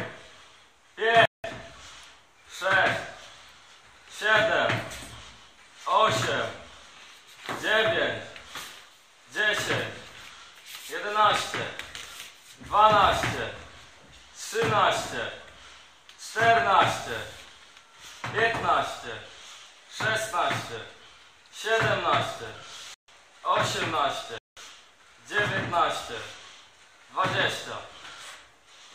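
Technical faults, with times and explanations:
1.25–1.44 s, 22.94–23.08 s and 24.38–24.57 s: block of digital silence. The audio drops to silence with no fade, leaving a short hole of about 186 ms, 139 ms and 186 ms. That fits an unfilled output buffer, 8192 samples for the first and last, unlike a fade-out or a lowered level.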